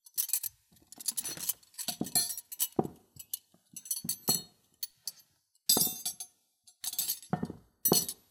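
DAB burbling appears from 1.85 to 2.12 s, from 3.86 to 3.99 s and from 7.95 to 8.10 s. Weak reception let bit errors slip past the error correction into the MP2 audio data, so corrupted samples put short blips of noise in single sub-bands and corrupted scale factors make individual sub-bands leap in level for up to a frame. The last burst is the densest, which points to roughly twice the error rate of the earlier two.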